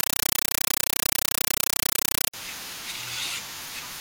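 From the very start until about 2.34 s, what you get is harsh, very loud chattering static instead of the speech. That's a compressed stream played as audio: an AC-3 bitstream reached the output as if it were ordinary samples and never got decoded. Each frame comes through as a burst of noise about 8 ms long followed by silent padding, repeating 31.25 times a second, which fits a 384 kbps stream and gives that rapid, rattling buzz.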